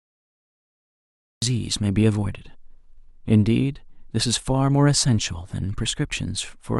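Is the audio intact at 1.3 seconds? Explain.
No. At 1.3 s the clip is still inside a cut-off start: capture began late, leaving digital silence from 0 to 1.42 s. At 1.42 s the speech breaks in mid-sound with no attack, shown as a flat waveform jumping abruptly into speech and a sharp vertical edge on the spectrogram.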